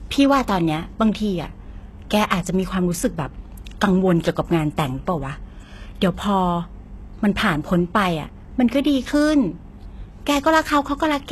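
Speech carrying plainly audible HE-AAC compression from start to finish, likely from a low-bitrate encode around 16 kbps. The treble is rebuilt from copied lower bands, so s sounds turn gritty and lispy. A spectrogram shows blocky, repeated patterns up to a hard ceiling at 12.3 kHz.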